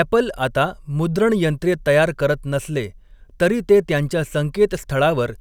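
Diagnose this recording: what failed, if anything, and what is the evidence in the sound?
Nothing in the speech recording points to a failure at any stage of the chain.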